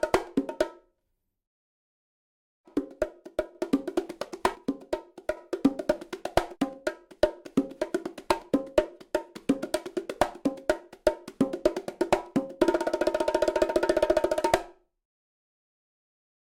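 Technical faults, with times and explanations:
1.67–3.55 s and 4.55–5.37 s, one channel drops out: the sound abruptly falls by about 6 dB, otherwise unchanged, then returns to full level each time. Likely one of two channels carrying the same sound went silent, halving the mono sum.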